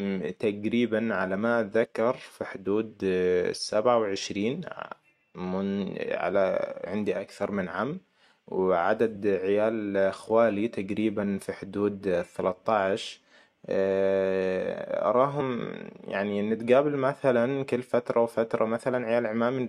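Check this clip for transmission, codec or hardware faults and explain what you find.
Damaged data in a compressed stream is present in five short bursts, at 1.84–1.86 s, 6.85 s, 9.15 s, 15.40–15.42 s and 17.63 s. Corrupted frames make the decoder misread the data and lose sync while it searches for the next frame header. Each event is a brief chirp, squawk, click or short hole in the speech.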